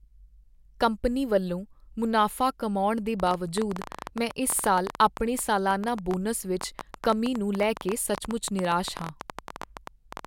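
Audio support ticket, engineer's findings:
Ticking/popping over the speech from 3.20 s to 10.26 s, running to the end. Train of clicks, about 11.4 per second, uneven spacing, around seventy in all, same shape each time. Peaks roughly 10 dB above the speech, audible in pauses too. Likely cause: interference from nearby equipment or a faulty connection or power supply injecting repeated pulses into the signal path. Check grounding, cabling, interface drivers.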